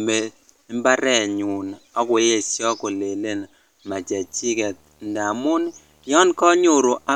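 From 3.93 s, after "mbarenyun ak koyesho kolelen", a video or display buzz appears: a screen couples in a faint 75 Hz field-rate buzz with hash, unlike mains hum.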